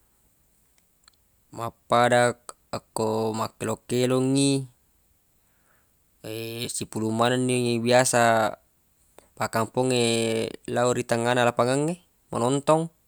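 Speech recording with no audible technical faults: no dropouts, clicks, distortion, level jumps or timing problems anywhere in it.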